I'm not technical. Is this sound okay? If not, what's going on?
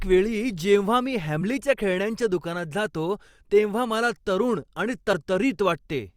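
No, there's one flaw. At about 5.12 s the speech is interrupted by a very brief glitch, a chirp, click or short gap, caused by damaged data in a compressed stream. Part of the stored audio file got scrambled there. The player couldn't make sense of that tiny stretch and had to hunt for the next readable piece.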